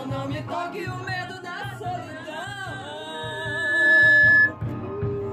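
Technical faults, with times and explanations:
3.14–4.53 s, loudspeaker feedback squeal: a single piercing tone at 1.7 kHz swells over roughly the first 0.7 s into a howl that ends up about 15 dB above the sound, because the microphone is hearing its own loudspeaker and the loop gain at that frequency tops one.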